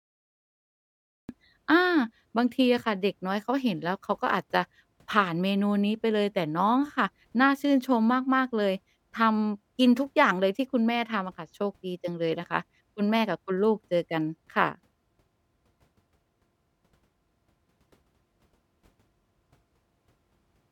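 A cut-off start hits at 1.29 s in this speech clip: digital silence until then, and the recording began late, so the sound arrives mid-utterance with no natural attack.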